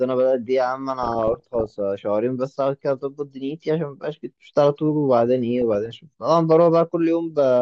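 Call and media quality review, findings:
DAB burbling, 1.02–1.78 s and 5.62–5.86 s: short noise blips over the speech. Weak DAB reception lets bit errors past correction and corrupt MP2 audio data, so noise blips appear in single sub-bands. Bursty and tied to reception, unlike steady low-bitrate codec swirl.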